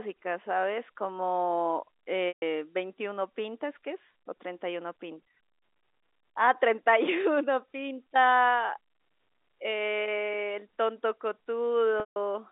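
Telephone-band speech with packet loss with pitch repetition at 2.28 s (140 ms) and 12.0 s (160 ms): the last pitch period buzzes briefly, fades to silence, then cross-fades back, unlike a clean dropout's abrupt hole.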